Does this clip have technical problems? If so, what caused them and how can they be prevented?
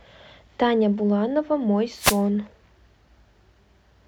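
Yes. From 1.95 to 2.23 s the speech is hit by a wireless microphone noise hit, a burst of static lasting about 0.28 s. The FM radio link faded as reflected signals cancelled, so receiver noise rose and broke through. On a spectrogram it appears as a broadband vertical smear over the speech harmonics; the waveform shows a ragged, noisy patch. Using diversity receivers and keeping antennas in clear line of sight prevents such dropouts.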